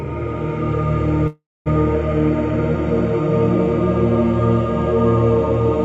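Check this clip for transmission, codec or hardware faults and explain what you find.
One fault stands out: a call audio freeze from 1.27 to 1.68 s. At 1.27 s the sound stops moving forward and the last instant is held as a buzzy tail that fades out. About 240 ms of silence follows, and then the audio resumes exactly where it left off, with nothing skipped. The likely cause is packets delayed in transit emptying the jitter buffer. The receiver filled 383 ms, so everything after runs that much later. A spectrogram would show flat horizontal streaks fading into a blank band, and the waveform a decaying smear and then a flat line.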